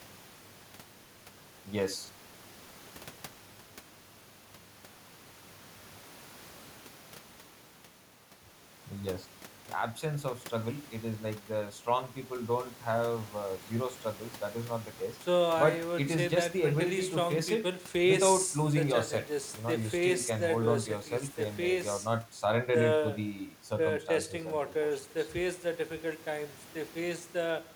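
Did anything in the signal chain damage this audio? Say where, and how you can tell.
No, nothing in the signal chain has damaged this speech recording. No audible event anywhere in it points to a problem at any stage, from capture through to playback.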